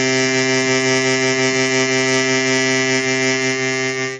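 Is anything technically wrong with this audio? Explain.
Yes. Throughout the music, the damage is likely from MP3 compression at a very low bitrate, near 32 kbps. Starved of bits, the encoder drops the treble entirely above about 9.3 kHz and discards weak frequency lines that flicker frame to frame, leaving a dull, heavily watery, swirling sound.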